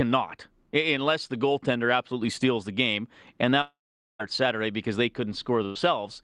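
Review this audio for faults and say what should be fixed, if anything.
Two network faults need fixing: a long dropout and a short burst of lost packets, with error-correction repairs inside each.

Long network dropout, 3.61 to 4.22 s. Incoming audio likely stopped arriving for about 0.6 s. The receiver had nothing to play, so it stretched the last sound into a fading buzz or hiss that decays into about 0.45 s of near-silence. When audio returns, roughly 0.58 s of speech is simply gone and the sentence jumps ahead. The fix is to provision a steadier network path with enough headroom that the stream is not starved for over half a second.

Burst of packet loss, 5.65 to 5.78 s. About 100 ms of consecutive packets were lost or arrived too late for the jitter buffer. The receiver held the last sound and turned it down across the gap, so speech briefly turns into a short fading smear before resuming with that tenth of a second missing. 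A slightly deeper jitter buffer and less congestion on the link would keep a burst this short from being dropped.

Lost packet rebuilt from error correction, 4.19 to 4.21 s and 5.75 to 5.77 s. In each case a single 20 ms packet went missing, and the decoder played the low-bitrate copy carried in the next packet. Both of these fall inside the larger losses above, where the rebuilt audio is briefly coarser and grainier than the surrounding sound instead of leaving a further hole. Reducing the underlying packet loss is what stops these rough patches from appearing.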